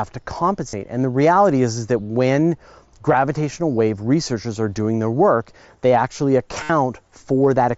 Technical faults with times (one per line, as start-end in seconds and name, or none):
0.69-0.73 concealed Bluetooth headset packet loss
3.13 concealed Bluetooth headset packet loss
4.84 concealed Bluetooth headset packet loss
6.63-6.70 concealed Bluetooth headset packet loss